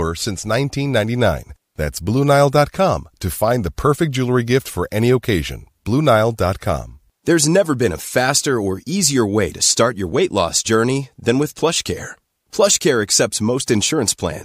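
Speech recording, no audible technical faults anywhere in the clip.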